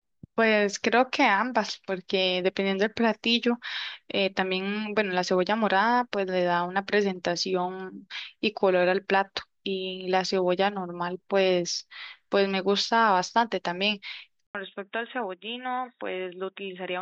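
At 14.47 s the speech cuts out for 80 ms, then returns through what is likely an input switched to a poorer device, such as another microphone or a headset call profile, and stays that way to the end. Nothing above 3.8 kHz survives, so the sound turns dull and boxy and loses its sibilant detail. The level drops by roughly 5 dB, and a faint new background noise sits well below the speech.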